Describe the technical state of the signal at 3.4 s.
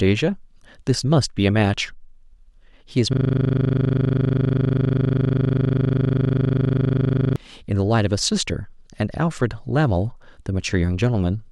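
At 3.4 s the speech is caught in a system hang loop, which runs from 3.13 s to 7.36 s. The driver stalled while the audio hardware kept replaying the same 40 ms of its ring buffer, over a hundred times. That 25 Hz repetition sounds like a rapid, rigidly mechanical stutter bordering on a buzz. Unlike a dropout, the sound never falls silent. Unlike packet-loss concealment, each repeat is an exact copy and doesn't fade or smear.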